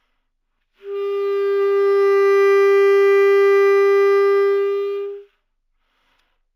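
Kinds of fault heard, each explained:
Imaging from linear upsampling: the rate was raised by joining neighbouring samples with straight lines, which filters very poorly. The top of the original band sounds dulled, and a faint mirrored copy of the spectrum sits between 8 and 16 kHz, roughly 40 dB below the sound itself. That fits a 16 kHz source brought up to 48 kHz, and the leftover image adds a light metallic shimmer to the brighter, high-frequency parts of the audio.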